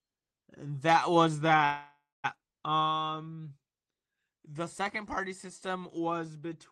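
At 1.65 s the speech stops moving forward and the last sound is drawn out as a fading buzz or hiss, sinking into about 0.23 s of silence before the speech resumes at 2.26 s. This is a call audio freeze, likely caused by packets held up in transit so the jitter buffer ran dry. Unlike a packet-loss dropout, the speech picks up exactly where it paused, with nothing skipped, and everything afterwards arrives about 0.59 s later.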